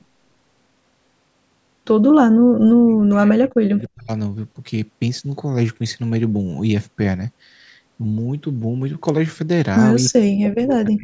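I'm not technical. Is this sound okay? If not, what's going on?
No. The voice sounds like it is talking over the other end of a call. From 2.56 to 4.11 s, again from 10.1 to 10.29 s, and from 10.49 s to the end, the voice nearly vanishes. This is likely speech suppressed in double talk: the call software mistook the voice for echo and turned it down.

Between 10.05 and 10.09 s, a faint copy of the voice comes back about 0.3 s late. That is likely an echo leak from a loudspeaker.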